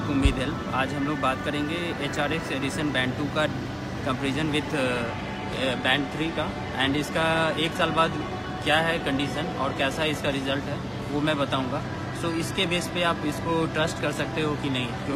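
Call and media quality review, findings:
Sudden drop to dull, synthetic-sounding treble with no gap, 4.84 s to end. Adaptive stream at a lower bitrate, consistent with a switch to a low-rate HE-AAC rendition.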